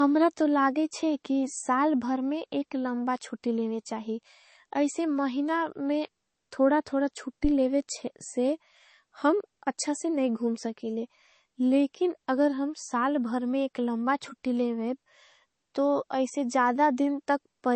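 Throughout, the speech was most likely encoded at a very low MP3 bitrate and later re-saved at a much higher one, a case of low-bitrate audio saved at a high bitrate. Nothing remains above 8.3 kHz, and the dull, swirly artefacts of the first pass persist.

At 7.44 s, just after "में थोड़ा थोड़ा", a supply was switched on the live input and the voltage step passed through the coupling capacitors as a phantom power thump: a deep low bump lasting until 7.53 s, decaying in about 19 ms.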